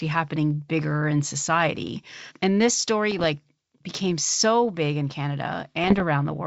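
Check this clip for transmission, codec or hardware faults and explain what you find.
Two kinds of fault are present in the speech: bursts of ADPCM bit errors and one dropped-samples click. The G.722 coding underneath, at 64 kbit/s, is clean, with wideband speech up to 7 kHz.

Bit errors on an ADPCM link occur from 3.11 to 3.24 s and again from 5.84 to 6.03 s. Flipped bits knock the decoder's step size and predictor off track, so each error rings on briefly. The result is pops and rough, gritty bursts with brief level jumps.

Dropped samples cause a single sharp click at 3.95 s, just before "so big in". The waveform jumps ahead, likely because a handful of samples, a fraction of a millisecond, went missing. Nothing audible is lost, but the discontinuity shows as a thin vertical line across the spectrum.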